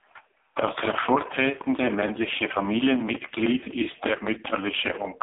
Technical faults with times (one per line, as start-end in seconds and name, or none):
0.00-5.22 AMR narrowband mobile codec
3.61-4.05 echo leak